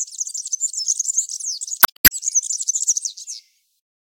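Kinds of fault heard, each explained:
Damaged data in a compressed stream: from about 1.79 to 2.12 s, a stretch of corrupted bytes trips up the decoder, which misreads those frames and hunts for the next valid header, so you get roughly a third of a second of disrupted audio.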